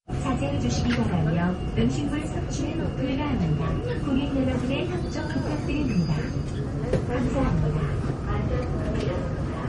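Throughout the clip the sound has a hard ceiling near 10.5 kHz and layered smearing and swirly artefacts, likely from transcoding between lossy codecs, consistent with a low-bitrate Opus encode re-encoded as MP3. A spectrogram shows the flat cut-off and patchy, blocky high bands.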